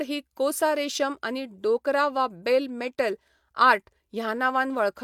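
No technical faults are audible in this speech.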